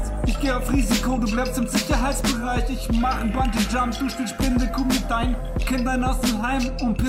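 Digital radio blending to analogue at 2.28 s: signal lost, 270 ms fade to FM. Hiss; level drops 2 dB. Back at 6.56 s.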